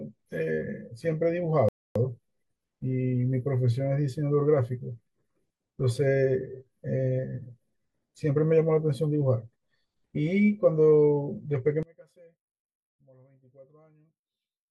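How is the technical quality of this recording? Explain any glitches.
Two glitches stand out, one brief and one that runs to the end.

At 1.69 s there's a rebuffering stall: the player ran dry and waited for more data, so the speech drops to silence for about 0.27 s, then picks up exactly where it left off. Nothing goes missing; the pause just adds time.

From 11.83 s to the end, the speech suddenly drops by about 30 dB and turns faint. The likely cause is one channel inverted: with reversed polarity on one side, the centred content cancels when the stereo is summed to mono, leaving only the weak difference between channels.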